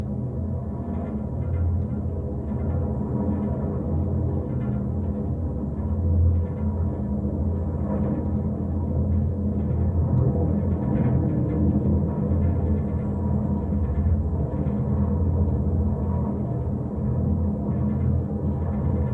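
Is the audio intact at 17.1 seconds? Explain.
Yes, the audio is intact at 17.1 seconds, with no fault audible at that moment.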